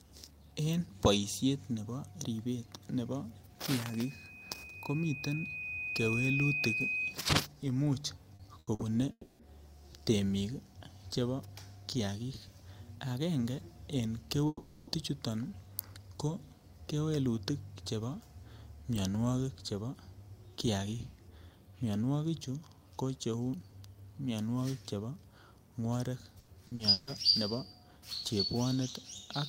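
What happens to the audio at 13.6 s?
At 13.6 s the speech continues intact, with no fault.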